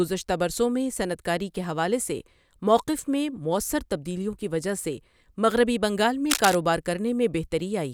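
Around 6.30 to 6.55 s there's a quarter-second burst of cable scratch noise, a dense, uneven crackle sitting right over the speech at roughly the same loudness. It's likely a worn cable or connector being moved, its contact resistance fluttering as it shifts.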